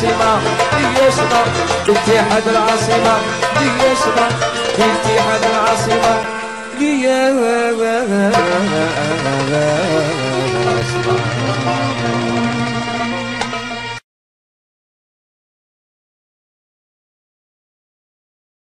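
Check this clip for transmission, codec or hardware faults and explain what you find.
There is one recurring codec fault: damaged data in a compressed stream, heard three times at 1.84–1.89 s, 6.21–6.25 s and 10.78–10.82 s. Each is a brief glitch of about 40 ms that breaks into the sound. Corrupted bytes there made the decoder misread those frames and lose sync until it found the next valid frame header.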